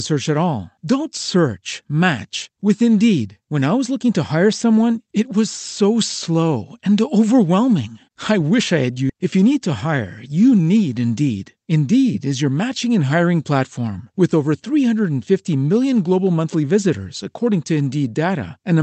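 At about 9.1 s, just after "I wish I had", a skip ahead occurs: roughly 0.7 s of speech is dropped and playback jumps straight on with no gap. On a waveform the two sides butt together, and the spectrogram shows an abrupt change in formant pattern with no silence.

From 9.69 to 10.67 s, after "you need", a jitter buffer speed-up trims short pitch-period pieces to drain excess buffered delay. Speech runs about 106% fast at unchanged pitch, sounding slightly hurried. The spectrogram keeps harmonic spacing but compresses syllable timing, with energy stopping near 8 kHz throughout.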